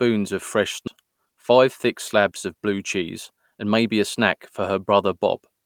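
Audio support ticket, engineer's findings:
Skip ahead at 0.87 s: speech jumps forward with no fill, roughly 0.7 s of audio gone and the cut edges joined directly. Queued audio dropped in transit or by the jitter buffer on overflow. Unlike a dropout, there's no silence or concealment at the join, just missing material.

Jitter buffer speed-up, 0.97 to 3.75 s: speech runs at about 108% and sounds hurried while pitch stays unchanged. Receiver trimmed short pitch-period chunks repeatedly to drain excess delay, around 0.2 s in total. Unlike a resampling error, pitch doesn't shift.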